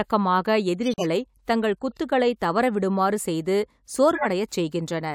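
At 0.86 s the speech drops into abrupt silence until 1.05 s. This is a corrupt frame muted: the decoder rejected damaged compressed frames and the player substituted silence. The 0.19 s hole fits about five lost frames, and timing is preserved afterwards.

The corrupt frame decoded fault occurs twice. Flipped bits were decoded anyway, placing energy at wrong frequencies for a couple of frames. The first, 1.91 to 1.97 s, just before "தவற விடுமாறு செய்து", is faint, at about −35 dBFS. The second, 4.15 to 4.26 s, right after "தவற விடுமாறு செய்து", is much louder, peaking at about −10 dBFS.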